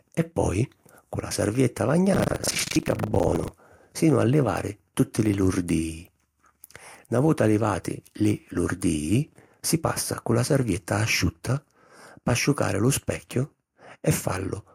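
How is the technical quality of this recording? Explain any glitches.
The recording has one clear glitch, buffer tearing, from 2.12 to 3.5 s. It starts after "cu la sarvietta" and clears before "sinu a livari tutti". Playback and the hardware read slipped, so each 40 ms period holds roughly a third of audio from about a tenth of a second earlier. The hard joins give a robotic 25 Hz rattle over the speech.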